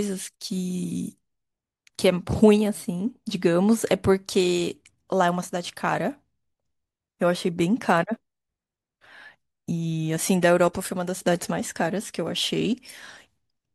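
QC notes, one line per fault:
No fault found in this speech clip.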